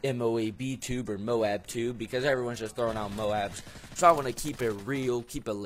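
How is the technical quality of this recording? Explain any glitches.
The recording's quality is held back at the start by an adaptive stream starting at a low bitrate. From 0.0 to 4.0 s the player is on a thin, low-rate version to get going fast. The top end sounds synthetic and smeared, with stronger codec artefacts, which points to something like HE-AAC at around 20 kbit/s. At 4.0 s it switches up with no gap, and the sound suddenly clears, consistent with AAC-LC near 96 kbit/s, though it still cuts off above 14.9 kHz.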